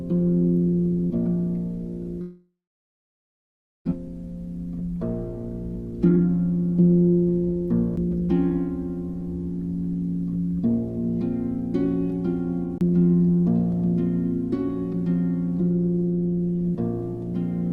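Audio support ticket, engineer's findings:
Long network dropout, 2.21–3.93 s. Last sound stretched into a fading buzz, then about 1.3 s of silence. Audio resumes with about 1 s missing. Likely network loss at receiver concealment. Unlike a CD skip, long fill-and-decay, no clean jump.

Jitter buffer speed-up, 5.86–7.68 s at 126% (about half a second trimmed), 8.09–8.69 s at 110% (a small fraction of a second trimmed). Buffer draining excess delay by cutting pitch-period pieces. Hurried but same pitch, unlike resampling drift.

CD skip, 7.96 s (mute of a few ms) and 12.78–12.81 s (mute around 30 ms). Tick, then abrupt jump to another point. Laser jumped tracks on the disc spiral. Brief mute with no fading fill, unlike a network dropout.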